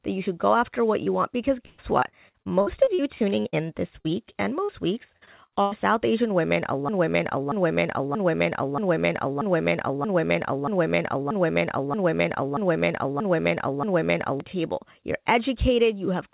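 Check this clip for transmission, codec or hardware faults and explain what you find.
Three kinds of fault affect the speech: brief concealed dropouts, two stretches of choppy robotic sound, and a long broken-record loop. Everything passes through a G.711 A-law call path, which is why nothing is heard above 4 kHz.

Short concealed packet loss occurs at 1.04 s, 4.01 s, 4.32 s and 4.64 s. Each is a quick smear or wobble, lasting 20 ms, 40 ms, 20 ms and 40 ms respectively. In each case a small piece of the call arrived too late to decode. The receiver patched the hole by extending the sound just before it and then blended back into the real signal.

Repeated packet loss (robotic sound) runs from 1.66 to 3.55 s and again from 5.17 to 5.73 s. The speech turns choppy, with pieces missing. In the first stretch the loss struck 11 times, the longest hole lasting 124 ms, and roughly a quarter of that span is synthetic fill. 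The second stretch has 4 holes, the longest 98 ms, and over a third of it is patched. Each hole gets a stretched copy of the preceding sound, and the next hole arrives before the speech can settle.

A broken-record loop takes over from 6.89 to 14.40 s. The same 0.63 s fragment plays 12 times back to back, identical each time, and whatever should have been heard during those seven-plus seconds never appears. The likely cause is a stall somewhere in the player, encoder or stream, which kept re-sending the last fragment it held instead of new audio.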